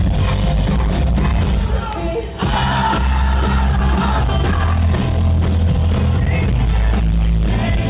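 Nothing stood out on listening, with the sound carried in the narrow band expected of a G.711 mu-law call path and nothing above about 4 kHz.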